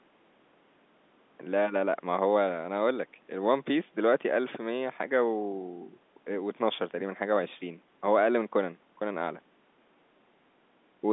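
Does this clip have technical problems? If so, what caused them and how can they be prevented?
No, the speech has the ordinary sound of a phone call, with the call's microphone processing trimming away the lowest bass and G.711 A-law telephone coding at 64 kbps holding it within the usual line band of about 200 Hz to 3.6 kHz, and none of that amounts to a technical problem.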